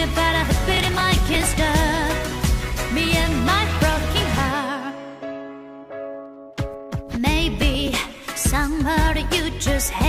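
Processor overload crackle appears from 0.72 to 1.57 s and again from 7.62 to 7.88 s. Buffers of around 5 ms miss their deadlines repeatedly, dozens in the first burst and a handful in the second, and each is skipped, so hard-edged dropouts produce a gritty tearing crackle.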